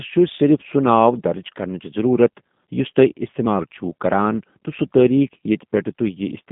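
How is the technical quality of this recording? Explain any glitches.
The speech is clearly degraded by low-bitrate telephone coding throughout. G.729 codec, throughout: the voice is rebuilt from a filter model and a few pulses per frame, giving rough, synthetic texture in a 150 Hz to 3.6 kHz band, which fits an 8 kbit/s rate. Unlike simple band-limiting, the voice itself sounds artificial.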